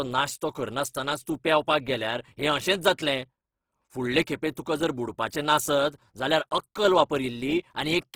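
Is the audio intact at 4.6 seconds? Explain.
No, not quite. Right around 4.55 s there's pre-echo: a brief smear of hiss, about 15 ms long, just ahead of a sharp attack. The codec spread its quantisation noise across a whole block, so noise meant for the loud onset leaks into the quiet moment before it.

That moment also carries the grain heard through the whole clip. It sounds rough and noisy, with tones filled in by noise, but it still reaches up to about 20.4 kHz. That points to Opus compression in its music (CELT) mode, likely at a low rate around 16 kbps.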